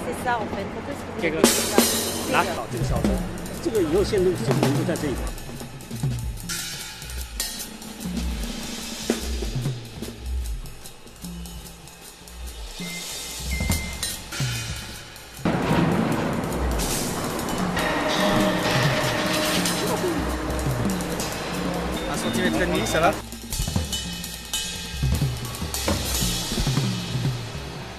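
At 15.49 s there is damaged data in a compressed stream. Corrupted frames make the decoder misread and lose sync. A brief blip results.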